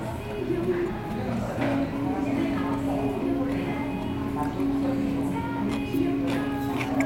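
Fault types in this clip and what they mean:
No faults detected in this recording of sounds.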